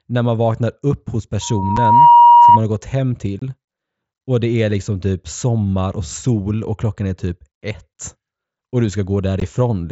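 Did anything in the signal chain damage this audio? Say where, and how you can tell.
Yes. Between 1.41 and 2.60 s, after "man vaknar upp hos" and before "har gått hem", a 951 Hz tone swells over about 0.7 s to roughly 10 dB above the speech. This is loudspeaker feedback squeal. It arises in the acoustic path, where the microphone hears its own loudspeaker and the loop gain passes one at that frequency.

There are three abrupt holes: 7.5 ms at 1.77 s, 22.5 ms from 3.39 to 3.42 s after "har gått hem", and 15 ms at 9.40 s. This is unconcealed Bluetooth headset packet loss on the headset link. The lengths fit whole 7.5 ms frames dropped and replaced by silence or an idle pattern, not patched over.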